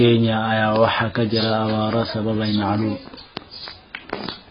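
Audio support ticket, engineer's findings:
Speech dull and band-limited throughout the clip, nothing above 5 kHz. Sibilants smeared, warbly fizz on sustained sounds. Likely cause: AAC compression, AAC-LC encoder starved of bits. Heavy damage fits a low bitrate around 16 kbps. Encoder drops the cut-off, leaves spectral holes and noise-filled bands. Spectrogram: hard ceiling at 5 kHz, blotchy gaps and smeared frame-sized blocks beneath it. Waveform: no obvious sign.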